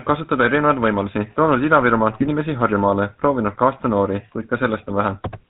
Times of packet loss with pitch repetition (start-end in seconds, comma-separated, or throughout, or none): none